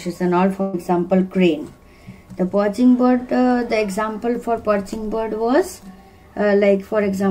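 A burst of packet loss hits from 0.61 to 0.75 s. Roughly 120 ms of audio never arrived in time, so the receiver stretched the last sound it had, fading it out across the gap, and then jumped ahead with that stretch missing.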